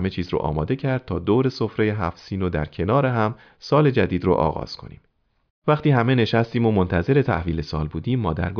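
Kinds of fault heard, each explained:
No faults detected anywhere in the speech; nothing to report.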